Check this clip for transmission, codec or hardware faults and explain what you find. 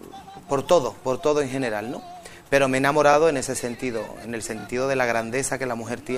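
Yes, there's one kind of fault: repeated frames. A compressed frame got written or sent again, so the decoder replays the same 26.1 ms chunk. You hear it as a short stutter at 3.12 s, where the chunk plays twice, and at 4.59 s, where it plays three times. Together they add about 78 ms to the audio.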